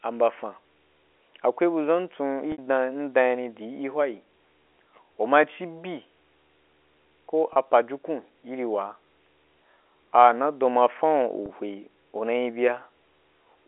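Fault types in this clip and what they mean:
Video or display buzz: A screen or video cable is coupling into the audio, leaving a faint, rasping buzz at 75 Hz with hash above it, far below the speech and present for the whole clip. The 75 Hz fundamental points to a display's field rate. That rate and the gritty, spiky texture set it apart from mains hum, which sits at 50 or 60 Hz and sounds smoother and rounder.
Packet loss with pitch repetition: Brief stretches of audio went missing, and the receiver filled each gap by repeating the last pitch period. This happens at 2.52 s for 60 ms, and at 7.53 s and 11.46 s for 30 ms each, the middle one just before "pajukun iri waa". The two 30 ms gaps sound like a short, slightly held, buzzy note rather than a silent dropout or a click, because the repeated cycle bridges the gap. The 60 ms gap fades out into silence, and the speech returns with a short cross-fade.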